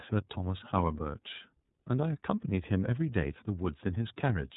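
Speech passed through the iLBC codec for its whole length, coded in frames that each stand alone. The roughness points to the 30 ms, 13.33 kbps mode. Nothing above 3.8 kHz survives, so the speech sounds narrowband and muffled, with a plainly audible rough, synthetic edge.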